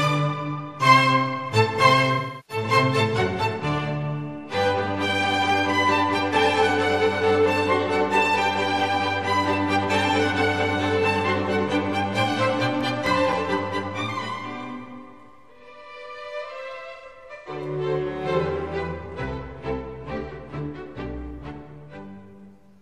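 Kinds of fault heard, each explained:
AAC frame loss with concealment: lost frames are filled from the last good spectrum, so 2.14–2.63 s and 16.95–17.49 s sound smeared and phasey, not clicked or silent.
CD scratch ticks: unrecoverable scratch damage returns each disc revolution, giving nine brief ticks of a few milliseconds, about four per second, from 12.29 to 14.36 s, unlike smeared concealment.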